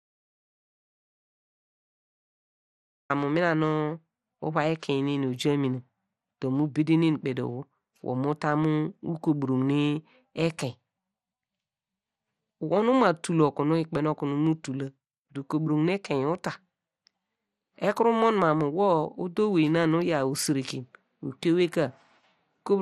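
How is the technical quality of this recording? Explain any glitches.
The technical quality is poor. The recording opens in dead silence, and the speech carries clear low-bitrate compression damage throughout.

From the very start until 3.10 s there is an audio dropout to silence, ending just before "mina nu uvai ekein". The gap is silent, with no room tone or noise floor, which points to the input signal having been lost while the recorder kept writing empty samples. A disconnected or muted source is the likely cause. Speech then begins abruptly, mid-flow.

Across the whole clip the speech sounds dull and gurgly, with a granular texture and nothing above 13.6 kHz. This is the signature of MP2 compression, likely at a rate around 64 kbps. Layer II divides the spectrum into 32 sub-bands and shares out a fixed bit budget. Starved of bits, it shuts off the top bands and quantises the remaining ones coarsely, so detail flickers in and out.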